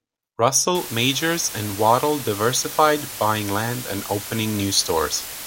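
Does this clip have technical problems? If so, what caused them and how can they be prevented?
Yes. From 0.75 s to the end, the speech is reduced to about 5 bits with dither added before rounding (low bit depth with dither). The rounding error becomes a constant, even white hiss roughly 10 dB below the speech, with no audible distortion. To prevent it, keep the signal at 16 bits or more through every processing and export stage.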